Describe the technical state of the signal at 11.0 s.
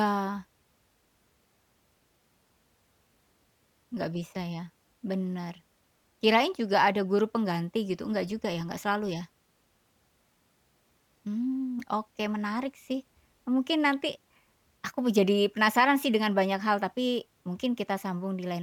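Around 11.0 s the signal is intact, with no dropouts, clicks, distortion or other faults audible at that point in the speech.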